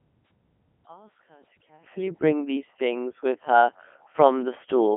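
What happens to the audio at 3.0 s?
At 3.0 s you're hearing the same heavy Codec 2 vocoder damage that runs through the whole clip. Instead of carrying the waveform, the codec sends pitch, voicing, energy and a rough spectral envelope, and the decoder rebuilds the speech from sine waves. So the voice comes out buzzy and robotic, squeezed into a telephone-style band of about 200 Hz to 3.4 kHz, with nothing above 3.5 kHz. The density fits Codec 2's top 3.2 kbit/s mode.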